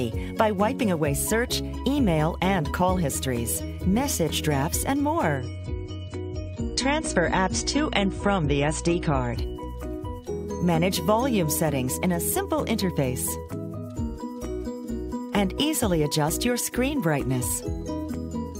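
From 5.37 s to 9.37 s the audio switches abruptly to an adaptive stream at a lower bitrate, as if the player stepped down after the connection slowed. Codec artefacts increase across those four seconds and the treble is cut off, with nothing above 9 kHz. The quality change fits AAC moving from roughly 96 kbit/s to 32 kbit/s. There is no gap at either switch, and the bandwidth returns abruptly at 9.37 s.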